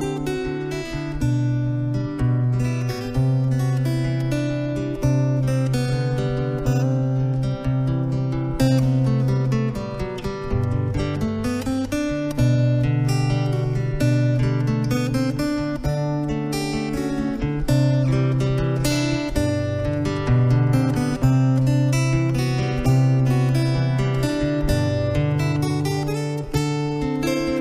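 No technical faults can be heard anywhere in the recording. Nothing audible interrupts or alters the sound at any point.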